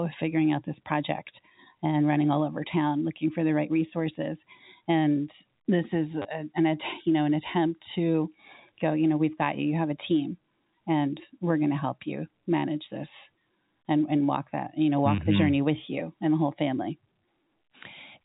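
A brief robotic stutter comes at 6.22 to 6.25 s, right after "this is", and again at 15.16 to 15.18 s, after "that you know walk". This is packet loss with the last packet repeated: the receiver replayed stale audio over the 30 ms and 20 ms gaps, in short chunks that suggest 10 ms packets, out of step with the pitch.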